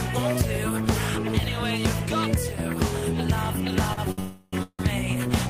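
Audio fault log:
3.93 to 3.99 s and 4.11 to 4.20 s, short stall from a late packet: twice in quick succession a packet didn't turn up on time and the jitter buffer ran dry, so the receiver held the last bit of sound, about 38 ms the first time and 65 ms the second, then picked up exactly where it left off. Nothing goes missing, but each spot drags briefly with a slight buzz or dip, and the timing slips later by the same amount.
4.20 to 4.55 s and 4.63 to 4.81 s, call audio freeze: right after the second stall the sound hangs for about 329 ms, then again for about 162 ms. The receiver keeps extending the last sound as a fading buzz, which is most likely because packets were held up in transit and the buffer emptied. The first freeze never goes silent, while the second drops to about 60 ms of silence before resuming. Nothing is lost, but a gap gets pushed in each time.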